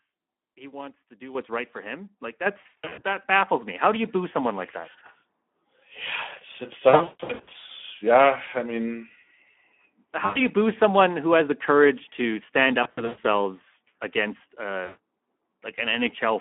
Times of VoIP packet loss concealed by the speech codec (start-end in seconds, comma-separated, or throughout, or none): 2.61-3.01, 6.89-7.71, 10.25-10.40, 12.83-13.28, 14.85-14.98